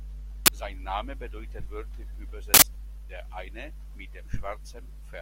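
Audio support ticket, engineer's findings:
Uninitialised buffer: loud crack in speech at 0.46–0.48 s, loud digital-noise burst at 2.54–2.62 s after "bedeutet wörtlich". Playback read unwritten memory; broadband full-height spectrogram blocks, loud waveform slabs.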